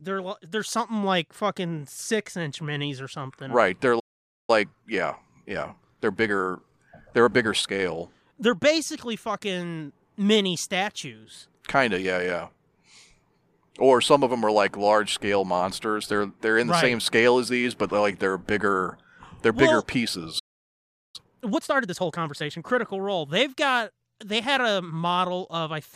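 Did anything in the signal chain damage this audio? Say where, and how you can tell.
Yes, at the playback buffer. A playback stall, likely from the player running dry or its thread blocking, silences the speech from 3.99 to 4.50 s (490 ms) and from 20.39 to 21.16 s (751 ms). Each shows as a flat waveform gap and a blank spectrogram column.

A time-compressed catch-up follows each stall: 1.15x speed from 4.50 to 7.50 s, then 1.5x from 21.16 to 22.66 s. The player cuts and cross-fades short pieces, so pitch holds. On a spectrogram, harmonics keep their spacing while syllables crowd closer together.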